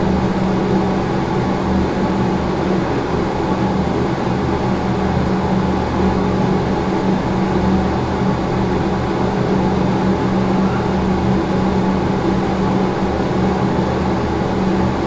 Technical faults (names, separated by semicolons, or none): none